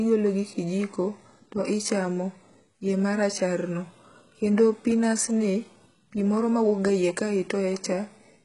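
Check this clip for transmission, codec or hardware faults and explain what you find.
One fault runs through the whole clip, and it is likely HE-AAC compression, heavily damaged, at a bitrate the sound puts around 12 kbps. Only the lower spectrum is coded. The treble is rebuilt by copying lower bands upward under a coarse envelope, so harmonics misalign and s sounds turn gritty and metallic. A spectrogram shows a hard ceiling at 11.1 kHz with a smeared, repetitive upper band.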